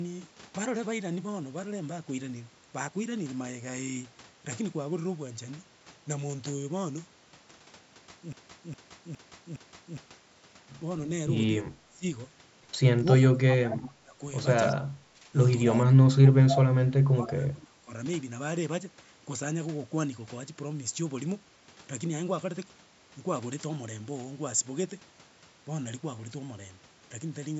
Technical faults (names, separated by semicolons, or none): broken-record loop; speech suppressed in double talk; echo leak